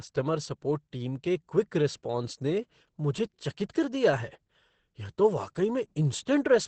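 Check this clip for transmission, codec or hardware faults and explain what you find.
One fault runs through the whole clip: Opus voice compression. From start to finish the speech sounds strongly muffled, hoarse and slightly robotic, with nothing above 8.6 kHz. The SILK linear-prediction coder in wideband mode is coding the excitation very coarsely, which fits a low bitrate near 10 kbps.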